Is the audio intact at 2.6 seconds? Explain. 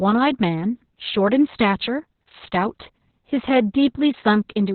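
No, Opus voice compression runs throughout, 2.6 s included: a very low-bitrate narrowband SILK coding, consistent with roughly 6 kbps, removes everything above 4.3 kHz, leaving the speech muffled, hoarse and slightly robotic.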